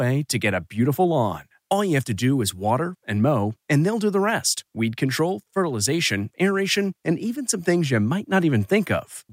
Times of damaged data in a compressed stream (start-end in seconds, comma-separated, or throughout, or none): none